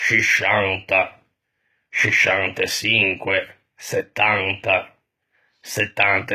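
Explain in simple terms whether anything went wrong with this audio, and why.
The speech has the dull sound of heavy compression from start to finish. Nothing above about 14.9 kHz survives. This is likely low-bitrate audio saved at a high bitrate. The large final file cannot bring back detail the earlier squeeze removed.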